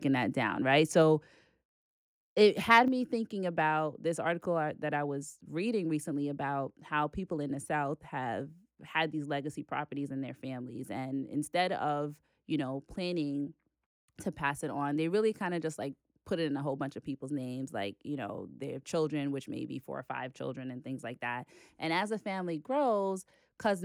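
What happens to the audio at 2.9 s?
At 2.88 s the speech and its background both drop abruptly by about 6 dB in a single step, a microphone volume stepped down. This is likely the call software judging the input too hot and cutting the device's capture gain at once, rather than ramping it.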